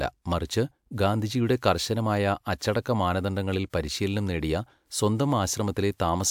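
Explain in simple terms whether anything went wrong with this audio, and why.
Nothing went wrong with the recording: the speech signal holds steady all the way through, with no audible technical faults at any point.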